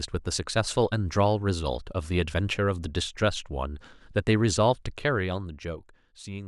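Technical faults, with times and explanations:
No technical faults can be heard in this speech.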